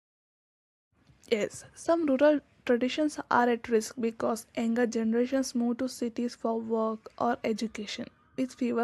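No dropouts, level jumps, distortion or timing disturbances can be heard anywhere in the signal, so there are no technical faults to describe.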